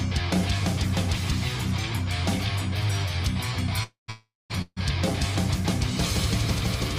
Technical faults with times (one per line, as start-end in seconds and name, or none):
3.83-4.78 call audio freeze